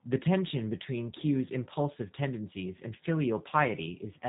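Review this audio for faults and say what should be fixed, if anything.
G.729 codec, throughout: nothing passes above 3.8 kHz, and sparse pulses driving a vocal-tract filter, at a rate that fits 8 kbit/s, leave the speech plainly rough and synthetic. To prevent it, record or route this speech through a wideband codec such as Opus or G.722 at a higher bitrate instead of narrowband G.729.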